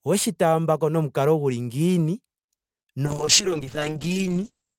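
From 3.06 s to the end, a call bitrate drop from 40 to 7 kbps makes the speech rough and muffled; the spectrogram shows content above 8 kHz abruptly vanishing.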